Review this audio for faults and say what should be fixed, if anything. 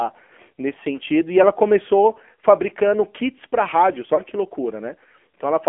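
The whole clip went through the AMR narrowband mobile codec at a low-rate setting, which fits the 7.4 kbps mode. The codec rebuilds the speech from a coarse vocal-tract model excited by a handful of pulses per subframe, and the line keeps only about 250 Hz to 3.4 kHz. The result is plainly audible codec damage: a thin, boxed-in voice with a buzzy, synthetic edge and nothing above the telephone band. To prevent it, carry the call over a wideband or higher-rate codec end to end.

Two lost AMR speech frames, each one frame or about 20 ms, failed on the radio link, so the decoder reused the previous frame's pitch and vocal-tract settings at reduced gain. The first falls at 0.96 to 0.98 s. The second comes just after "fabricando kits para rádios", around 4.16 to 4.23 s. Each produces a brief dip or warble, with the voice returning weak or rough for a moment. To prevent them, improve radio coverage or switch to a more robust codec mode.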